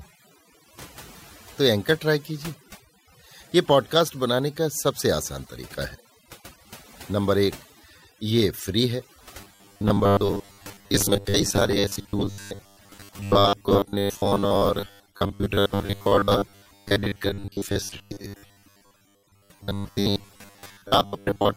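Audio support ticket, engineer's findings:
Overdone noise removal, whole clip. Background dropped, breaking up into twinkling specks. Noise reduction set too strong: single frequency bands cut hard wherever they sit near the noise estimate, taking quiet speech detail with them.

Robotic sound from repeated short buffers, 9.41 s to end. Rigid metallic buzz at 100 Hz, speech still loosely traceable. Likely playback buffer underrun: last 10 ms looped while fresh audio is skipped, with most of the stretch made of repeats.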